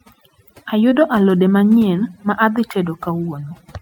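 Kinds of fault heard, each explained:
Overdone noise removal: The background drops and breaks up into twinkling specks. A noise reduction stage set too strong shuts off individual frequency bands near its noise estimate, taking the quieter parts of the speech with them.
Short concealed packet loss: At about 0.89 to 0.93 s, just before "alode manyien ma adhi", there is a brief smear or wobble. Roughly 20 ms of audio never arrived, and the receiver patched the gap by extending the preceding sound, then blended back.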